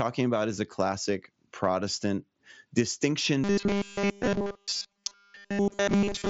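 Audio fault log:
3.44–6.30 s, robotic sound from repeated short buffers: a rigid, metallic buzz fixed at 200 Hz replaces nearly all the natural sound. This is likely from new audio arriving too seldom, with a 5 ms chunk looped in its place. On a spectrogram, evenly spaced 200 Hz harmonic stripes override the speech formants.
4.23–4.27 s and 5.63–5.65 s, concealed Bluetooth headset packet loss: about 37.5 ms is lost in the first event, spread over 90 ms with no run longer than 15 ms, and 22.5 ms in the second. This fits several 7.5 ms mSBC frames, with the gaps patched from recent waveform. The result is brief flat buzzy spots with a faint warble at recovery. A waveform shows copied cycles at steady level, and the spectrogram shows a smeared, frozen patch inside the 8 kHz band.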